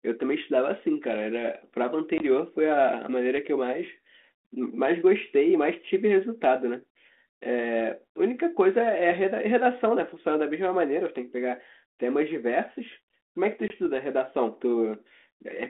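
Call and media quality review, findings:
Hard-edged 20 ms dropouts to silence at 2.18 s and 13.68 s, each followed by slightly distorted speech that settles within tens of milliseconds. Packet loss on an ADPCM call: about one packet lost, G.726 decoder predictor and step size thrown out of sync with the sender's. Light 32 kbit/s telephone-band coding throughout.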